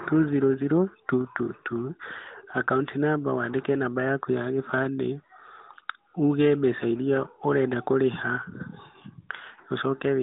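No technical faults occur in the speech, which carries the light character of the AMR narrowband mobile codec at 12.2 kbps, within a telephone band of roughly 150 Hz to 3.7 kHz.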